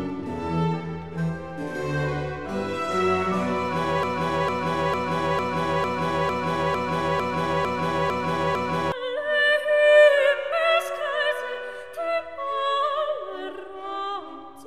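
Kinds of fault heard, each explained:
Broken-record loop: the playback or streaming chain likely stalled and kept re-issuing the last fragment it had buffered, so the output is stuck on one piece of audio. From 4.03 s to 8.92 s a single 0.45 s segment plays eleven times back to back with identical content each pass, producing a rhythmic stutter. Whatever sound belonged in those roughly five seconds never arrives, and the audio resumes only after the repetition stops.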